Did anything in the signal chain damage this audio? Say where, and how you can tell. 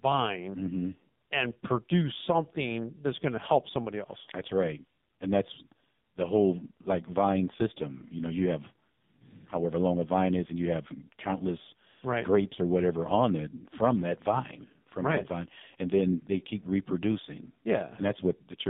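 Yes, at the codec stage: AMR narrowband mobile coding throughout. Speech is confined to 150 Hz to 3.7 kHz and sounds heavily buzzy and synthetic, which fits a low mode near 6 kbps.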